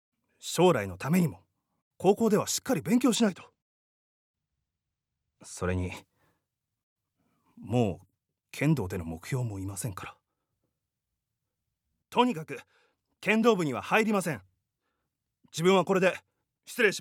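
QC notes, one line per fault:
3.15 to 5.97 s, channel delay (comb filtering): one side lags roughly two samples, so the mono sum notches out around 10 kHz and the top end goes dull.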